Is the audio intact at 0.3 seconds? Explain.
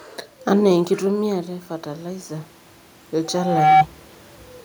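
Yes, the audio is intact at 0.3 seconds, with no system fault in the speech at that point.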